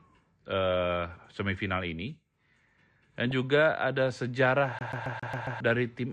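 MP2 compression runs through the whole speech clip: the sound is dull and carries a gurgling, granular edge. This is likely low-rate MPEG Layer II coding, which fits a bitrate around 80 kbps. With too few bits, upper sub-bands drop out and the remaining ones are coarsely quantised.

DAB burbling appears at 3.31 s, hitting two frames. A small share of bit errors slipped past error correction into the MP2 data, so corrupted samples put short blips of noise into individual sub-bands for a moment.

CD stuck on one turn follows from 4.79 to 5.60 s. The same 136 ms snippet of speech repeats six times, each with a short mute at the jump, giving the fast, even stutter of a skipping disc where a scratch keeps throwing the laser back one track.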